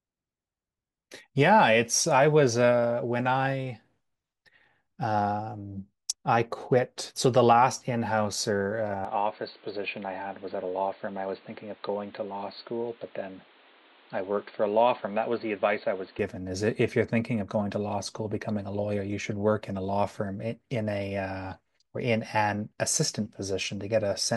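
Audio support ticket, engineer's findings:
Speech dull and boxy from 9.05 to 16.19 s: nothing above 4.5 kHz, a bit quieter, fresh faint noise. Likely input switched to a poorer device, no gap at the switch.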